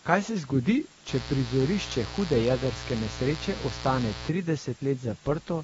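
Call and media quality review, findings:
Low bit depth with dither, whole clip: constant, even hiss under the speech at about 25 dB below the signal, no grit or distortion on loud syllables. Points to roughly 7-bit resolution with dither ahead of rounding, which turns the rounding error into flat white noise. Unlike codec noise, it stays the same whether speech is present or not.

AAC compression, whole clip: dull, smeared sound with a swirly, warbling texture on sustained vowels and sibilants, and nothing above 7.7 kHz. Likely an AAC-LC encode at a low rate, around 24 kbps, where the perceptual coder drops the top band and starves or noise-fills others. Unlike the dither hiss, this damage moves with the speech.

Mains buzz, 1.09 to 4.29 s, starting just after "se zgodi": steady, raspy buzz at about 10 dB below the speech, built on 60 Hz with harmonics climbing into the kHz range. Mechanism: sharp switching spikes twice per mains cycle from a dimmer, rectifier or unshielded line leaking into the path. 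Unlike a pure hum, it sounds rough and buzzy, not a smooth low tone, and it starts and stops rather than running throughout.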